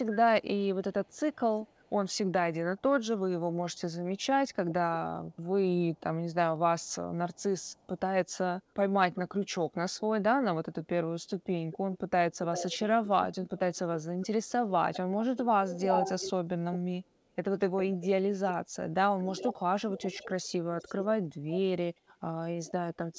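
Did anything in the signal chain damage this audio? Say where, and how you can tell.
Yes. The damage sits in call processing, where the echo canceller most likely let loudspeaker pickup through. From 0.09 to 4.25 s there is a very faint delayed copy of the speech, about 384 ms behind and roughly 35 dB down. From 5.96 s to the end it returns much stronger, about 397 ms late and only about 10 dB below the direct speech. It is a trailing double of the speech. That is an echo leak.

Between 3.57 and 5.5 s the same processing stage probably mistook overlapping talk for echo and clamped down on both, which is speech suppressed in double talk. The speech dips in pieces during this stretch, with the deepest cuts falling by around 35 dB and about a second of audio affected in total. The G.722 path at 64 kbps explains the absence of anything above 8 kHz and adds its usual coding noise.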